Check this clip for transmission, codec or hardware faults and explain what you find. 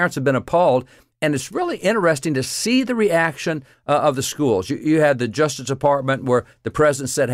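No transmission, codec or hardware faults are audible anywhere in this speech recording.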